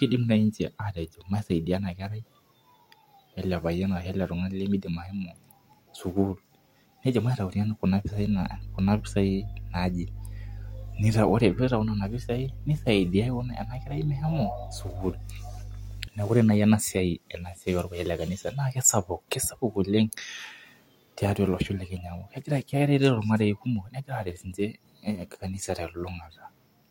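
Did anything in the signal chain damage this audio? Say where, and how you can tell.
Yes. The analogue wiring picked up mains hum, most likely from a ground loop or a nearby transformer coupling the 50 Hz power line into the signal path. From 8.17 s to 16.08 s, a steady low 50 Hz tone with some low harmonics sits under the speech, only about 10 dB below it. Because it starts and stops rather than running through the whole recording, the hum points to an interference path that was present only for that stretch.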